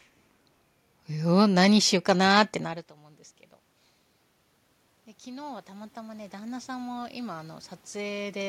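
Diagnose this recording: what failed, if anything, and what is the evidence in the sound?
The failure is automatic gain rising in the call-processing stage. From 5.23 s to 8.44 s the level climbs steadily by about 12 dB after the input fell by about 24 dB. The control judged the signal too quiet and slowly opened its gain. The room noise swells along with the speech, which separates this from the talker simply moving closer. The earlier change in the speech level near 2.5 s, where the talker moved, leaves the background unchanged.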